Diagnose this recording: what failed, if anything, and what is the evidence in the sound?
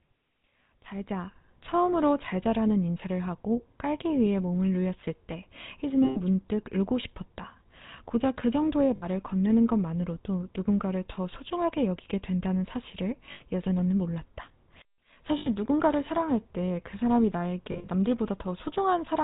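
The speech passed through the GSM full-rate codec, a vocal-tract model driven by sparse, regularly spaced pulses. The sound is plainly buzzy and gravelly throughout, and nothing above 4 kHz survives. The roughness fits a 13 kbps full-rate encoding.

Lost GSM frames on the network leg were concealed by repeating the last good frame at falling level. This produced rough, metallic rings at 6.04–6.20 s and 17.72–17.89 s (120 ms each), 8.96–9.07 s (60 ms), and 13.32–13.42 s and 15.38–15.48 s (80 ms each). The last burst is scattered over 160 ms, with the longest run around 70 ms.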